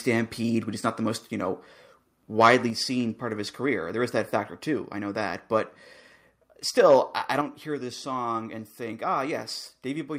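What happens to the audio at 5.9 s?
Nothing goes wrong at 5.9 s; the speech runs through that moment intact, with no dropout, click or distortion.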